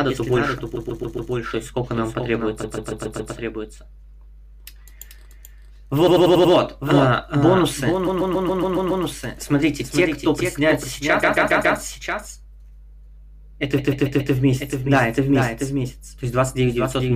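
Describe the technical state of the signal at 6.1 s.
At 6.1 s the sound falls inside repeated frames, 6.06 to 6.53 s: a block of about 93 ms replays five extra times, a stutter adding 0.46 s, visible as identical waveform tiles. A doubled audio track also runs throughout, a full-band copy about 5 dB quieter and roughly 400 ms behind, likely from a second capture path, appearing as a shifted duplicate on the spectrogram.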